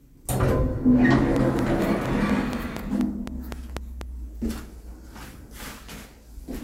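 An everyday sound recording carries a train of clicks from 1.36 to 4.02 s. About ten sharp, similar pulses tick at a regular 4.15 per second, standing well above the sound. Interference from nearby equipment or a faulty connection or power supply is the likely source.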